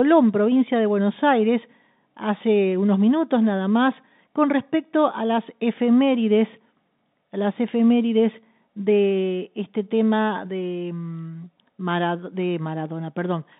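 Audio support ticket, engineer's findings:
No faults found on this one; the speech comes through the G.711 phone line as expected, band-limited to about 150 Hz to 3.7 kHz like any ordinary call.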